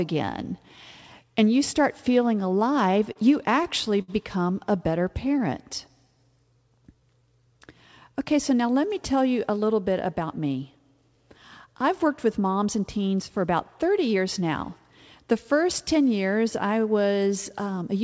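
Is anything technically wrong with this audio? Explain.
Yes, three jitter buffer faults affect this speech clip, which comes through a call path with nothing above 8 kHz, consistent with G.722 at 64 kbps.

From 2.26 to 4.1 s, right after "and you start", there are repeated stalls (stutter). Packets arrived late, the buffer ran dry nine times, and the receiver extended the last sound to fill 161 ms in total, the longest gap 64 ms. Nothing is lost, unlike packet loss concealment, so the audio drags and hiccups rather than dropping pieces.

From 4.99 to 7.54 s comes a jitter buffer slow-down. To rebuild its reserve, the receiver repeated individual pitch periods or bits of pauses many times, adding 139 ms. Speech runs at about 95% speed at unchanged pitch. Unlike the stalls, the stretching is continuous, with no stop-start breaks.

From 9.49 to 12.05 s, between "let me tell you" and "with moms and teens", a jitter buffer speed-up trims excess delay by cutting short stretches of one or a few pitch periods, about a fifth of a second in all. 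Speech runs hurried at 107% speed, yet pitch stays the same, which rules out a sample-rate error.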